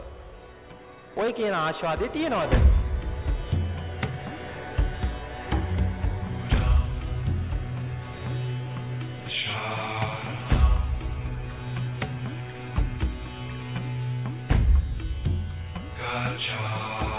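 No technical faults can be heard anywhere in this recording.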